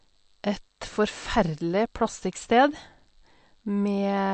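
Throughout the speech, nothing sounds above 8.3 kHz, and weak detail flickers in and out, giving a plainly audible watery swirl, likely from MP3 compression at a low bitrate near 48 kbps. A spectrogram shows a flat ceiling at 8.3 kHz and speckled, gappy upper bands.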